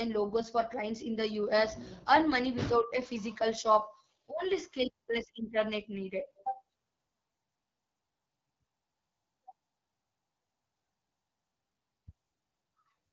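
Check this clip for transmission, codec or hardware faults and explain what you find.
One codec fault runs through the whole clip: AMR wideband (HD Voice) coding at a very low rate.

From start to finish the speech sounds rough and raspy. The damage is plainly audible. The codec rebuilds speech up to 6.4 kHz from a pulse-excited vocal tract model and fills 6.4 to 7 kHz with shaped noise. That roughness points to one of its lowest modes, around 8.85 kbit/s, where too few bits remain to code the excitation pulses faithfully.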